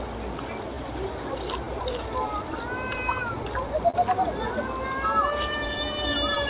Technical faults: clock drift between sender and receiver; repeated timing corrections; short stall from a late packet

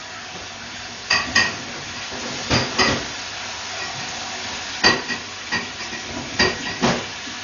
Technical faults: Dolby Digital compression

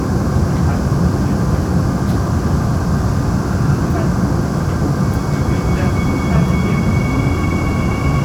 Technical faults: none

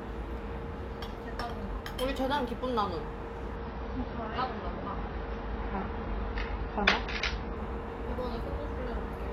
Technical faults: adaptive stream at a lower bitrate

